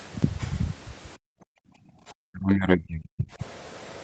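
Background gated by the echo canceller, from 1.17 to 1.99 s, is the first fault in this short speech recording. The room tone beneath the talker collapses by up to about 40 dB for roughly 0.7 s in total, then comes back. The canceller heard the far-end loudspeaker playing and clamped the microphone hard, muting the ambient bed along with any echo. Speech suppressed in double talk follows from 2.28 to 3.42 s. The talker's level sinks by something like 40 dB at its worst, across roughly a second. The likely cause is the far side talking at the same time: unable to tell the local voice from loudspeaker echo, the canceller attenuated both. Throughout, the call path's band limit leaves nothing above 8 kHz, which fits a 40 kbps Opus stream.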